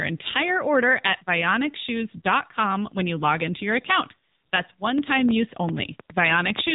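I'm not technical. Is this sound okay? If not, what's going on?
No. The whole clip has gone through the AMR narrowband mobile codec, the squeeze older mobile phone calls use. Nothing above 3.8 kHz survives, so the speech sounds boxed-in. Unlike simple muffling, the voice itself turns plainly buzzy and synthetic.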